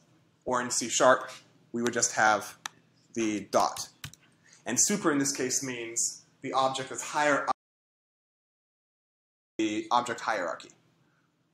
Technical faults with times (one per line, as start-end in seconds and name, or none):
7.52-9.59 audio dropout to silence